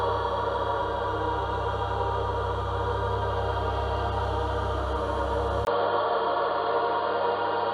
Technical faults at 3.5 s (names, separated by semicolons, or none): none